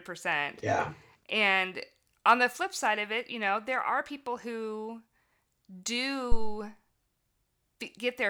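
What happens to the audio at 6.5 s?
At 6.5 s there is a phantom power thump spanning 6.32 to 6.63 s. A supply switched on or off on the live input sends a DC step through the coupling capacitors, giving a deep low-frequency thump peaking at about -12 dBFS and decaying over roughly 70 ms.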